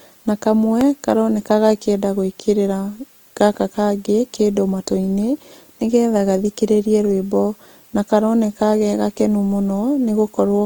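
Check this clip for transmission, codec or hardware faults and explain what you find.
Two faults are audible in this speech clip.

Throughout, the grainy, rough texture points to likely Opus compression in its CELT music mode, filling starved bands with folded or noise content; bandwidth still reaches about 20 kHz.

At 0.81 s there is a repeated buffer: late audio forced one tiny block, fitting a 64-sample buffer, to replay once, giving a brief click.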